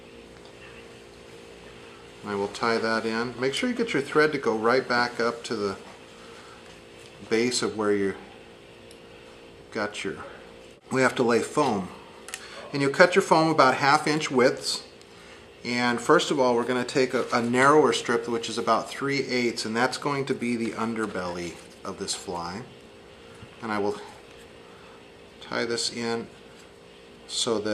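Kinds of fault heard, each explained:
No technical fault can be heard anywhere in the audio. Nothing in the sound points to a problem in the recording or playback chain.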